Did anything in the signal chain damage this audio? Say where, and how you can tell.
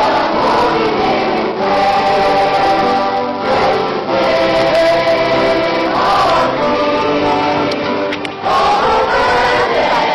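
Yes. It's at the network and codec stage: an adaptive stream at a lower bitrate. At 6.31 s the quality drops abruptly with no gap, and it stays down to the end at 10.14 s. From there on there's nothing above 12.3 kHz and the codec artefacts rise. The player switched to a cheaper rendition because the connection slowed. The sound points to a jump from roughly 96 kbit/s AAC down to something like 16 kbit/s HE-AAC.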